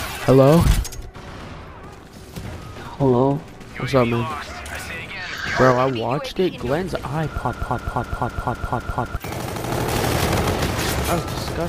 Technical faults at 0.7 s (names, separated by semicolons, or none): none